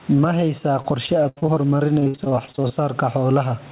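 Throughout the clip there is gain pumping. The background swells by around 10 dB in each pause and drops under every loud syllable, most likely from gain set far too high with a fast limiter clamping down. On a waveform the envelope looks flattened. On a spectrogram the noise floor brightens between syllables. The room noise that rises in those gaps sits about 35 dB below the speech.

From 0.82 to 2.72 s there is repeated packet loss, which gives a robotic sound. Short holes arrive one after another, each filled by stretching the previous sound, and the longest gap is 77 ms. About a quarter of that stretch is patched this way, so it sounds choppy. The spectrogram shows smeared, repeated harmonic slices within a band that stops at 4 kHz, which fits a narrowband telephone codec.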